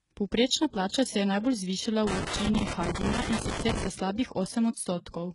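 HE-AAC compression runs throughout this speech. Nothing reaches above 11.1 kHz, and the heavy codec damage points to a very low bitrate of about 12 kbps. The likely cause is that the treble was rebuilt by spectral band replication. Copied lower bands stand in for the real highs, so harmonics misalign across the crossover and sibilants sound gritty or metallic.

Pre-echo appears from 0.88 to 0.92 s, just before "se je". The codec spread its quantisation noise across the whole transform block, so noise sized for the coming attack fills the quiet 46 ms ahead of it. The result is a brief hiss and a smeared onset.

Loose connector crackle runs from 2.07 to 3.87 s, ending just before "za slabih". A worn or dirty contact kept making and breaking, chopping the signal, and any DC on the line turned those breaks into pops. It sounds like an irregular burst of scratchy crackle lasting nearly two seconds.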